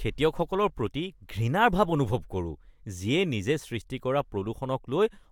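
No technical faults are audible anywhere in the recording.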